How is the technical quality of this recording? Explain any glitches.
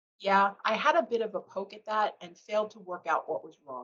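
No glitches turn up anywhere here, and the speech just has the trimmed top end you'd expect from a call link whose codec stops at around 8 kHz.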